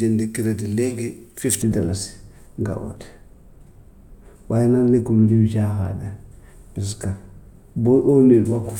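From 1.62 s to 8.69 s the speech turns dull and muffled, its treble rolling off smoothly to about 11 dB down at 10 kHz relative to 1 kHz. This is de-emphasis applied wrongly: a treble cut meant to undo pre-emphasis, applied where none was present or applied twice.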